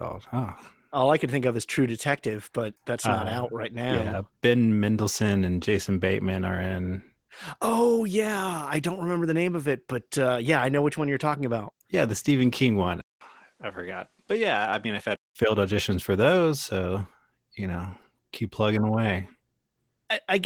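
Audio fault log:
throughout: Opus voice compression. The speech sounds hoarse, slightly muffled and a little robotic, which fits Opus in hybrid mode at around 16 kbps. The lower band is coded by linear prediction with coarse excitation, and a thin transform layer carries the top.
13.01 to 15.36 s: input switched to a poorer device. After a 200 ms gap the sound drops about 5 dB, loses everything above 11.4 kHz and gains a faint new noise floor. This is likely the system briefly changing to a narrower microphone.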